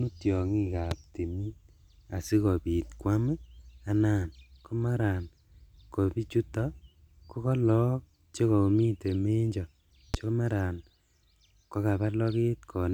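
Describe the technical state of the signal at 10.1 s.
Right at 10.14 to 10.16 s, just after "ko kolook chekomiten menjo", there's a single loud pop sitting on top of the speech, peaking at about 15 dB above it. It's most likely a brief electrical pulse from a plug, switch, static discharge or driver hiccup, which the downstream circuitry shapes into a short, sharp thump. The speech itself carries on straight through underneath, so it's an added transient rather than a dropout.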